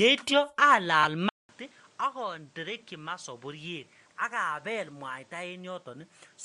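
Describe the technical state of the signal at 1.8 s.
At 1.8 s the speech has been on a poorer input since 1.29 s, likely a switch to another microphone or headset, running to the end after a 0.2 s silence. It is duller and about 10 dB quieter, with nothing above 9.9 kHz and a new noise floor roughly 30 dB down, visible as a spectrogram ceiling and a smaller waveform.

Bluetooth LC3 compression, likely at a rate near 48 kbps with 7.5 ms frames, lends a grainy, breathy edge throughout. The spectrogram shows blocky, noise-filled patches in the upper band.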